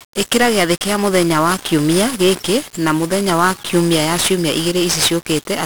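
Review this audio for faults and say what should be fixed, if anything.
Hard clipping throughout the speech: a stage was driven about 9 dB past its ceiling, so around one percent of samples are sliced flat, adding crackle and harsh upper harmonics.

1-bit DFPWM compression throughout: a one-bit adaptive coder, consistent with roughly 48 kbps, leaves heavy broadband quantisation noise, making everything fuzzy and crackly with treble buried under hiss.

Lower the gain before the overloading stage and encode with a higher-resolution codec instead of DFPWM.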